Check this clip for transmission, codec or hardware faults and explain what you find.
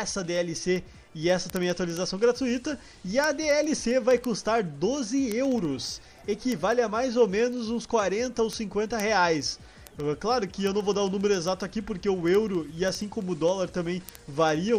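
One fault: word clock ticks from 0.16 s to 14.76 s, ticks about every 70 ms, where an unlocked receiving clock, off by roughly 300 ppm, drops or repeats single samples.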